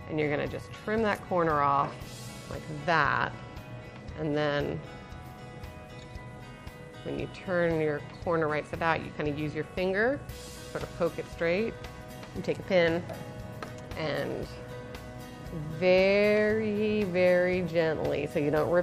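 No technical faults can be heard anywhere in this audio. There is no moment where the signal chain audibly goes wrong.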